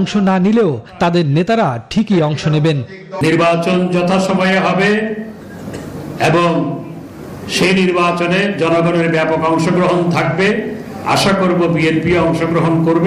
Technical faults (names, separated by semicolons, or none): none